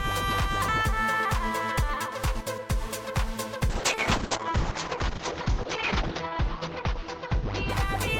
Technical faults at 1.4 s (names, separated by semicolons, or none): none